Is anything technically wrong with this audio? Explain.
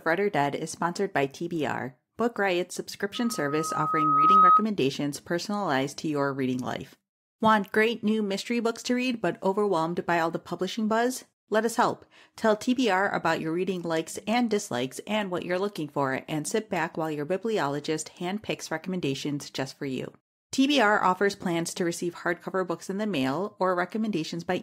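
Yes. A loudspeaker feedback squeal runs from 3.15 to 4.65 s, ending just before "personalized to your reading". A microphone is hearing the loudspeaker it drives, and at 1.3 kHz the gain around that loop exceeds one, so the tone feeds on itself. It swells over roughly a second into a piercing single-pitched squeal that rises to about 10 dB above the speech, then stops.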